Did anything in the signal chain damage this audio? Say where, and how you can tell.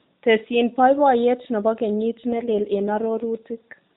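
Yes, an AMR rate drop in the network stage: after "baibayet nebo kenyit", 2.32 to 3.25 s turns buzzier, fitting a 12.2 to 5.9 kbps step-down. The spectrogram keeps its 4 kHz ceiling with no gap, but the harmonics blur.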